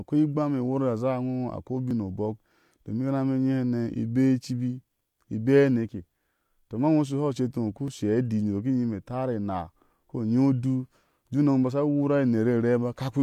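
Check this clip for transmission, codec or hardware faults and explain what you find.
Three small skips come from overlap between stream segments. The audio arrives in roughly 2-second segments whose time stamps overlap, so the player discards 34 to 41 ms of audio that was never duplicated. The waveform jumps across the gap, heard as a brief click or stumble at 1.91 s (after "a koi", before "obɔk domin"), 5.89 s (after "i bea") and 7.88 s (after "ceti iŋo uku").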